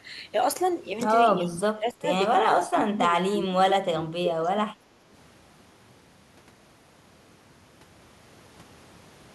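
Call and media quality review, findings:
Speech suppressed in double talk, 1.3–2.1 s and 2.45–5.04 s: level drops about 30 dB, then about 25 dB. Likely the echo canceller ducking the near end during overlapping talk.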